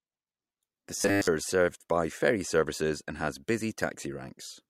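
At about 0.97 s the speech goes robotic for roughly 0.3 s, until 1.27 s: a hard, metallic buzz pinned at 100 Hz that still loosely tracks the talking. That's the classic robotic sound from repeated short buffers. The likely cause is audio arriving too slowly, so the player keeps looping the last chunk, which fits a 10 ms buffer, for most of that stretch while the real audio gets skipped.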